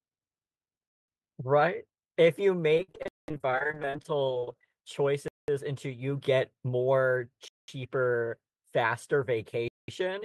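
From 2.74 to 4.63 s there's repeated packet loss, giving a robotic, choppy sound: dozens of dropouts up to 58 ms, each patched by stretching earlier audio, with about a third of the span concealed.

There's also a gap between chunks, with 200 ms of silence at 3.08, 5.28, 7.48 and 9.68 s. That fits 2 s chunks joined with dead air.

Between 6.53 and 6.81 s a jitter buffer speed-up trims a few tens of milliseconds, so the speech runs at 110% and sounds briefly hurried at the same pitch.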